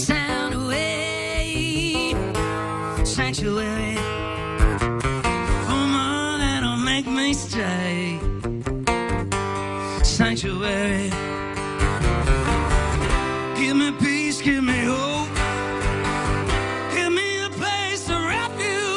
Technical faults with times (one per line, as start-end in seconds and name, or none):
0.00-4.73 wrong sample rate